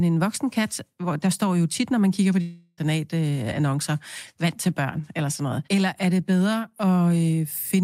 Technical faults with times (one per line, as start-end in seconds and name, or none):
2.41-2.79 long network dropout